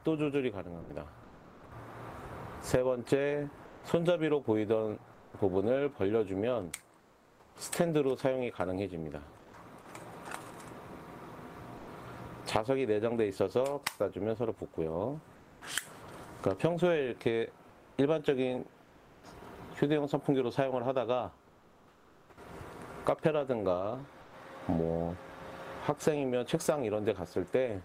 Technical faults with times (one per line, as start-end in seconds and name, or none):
0.81-0.89 sound dropped by the voice detector
0.81-9.53 comfort noise in place of the background
11.77-11.87 sound dropped by the voice detector
15.35-15.61 comfort noise in place of the background
17.69-19.23 comfort noise in place of the background
21.47-24.33 comfort noise in place of the background